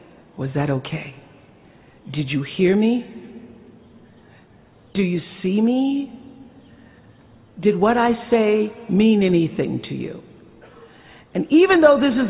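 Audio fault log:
Nothing stood out on listening.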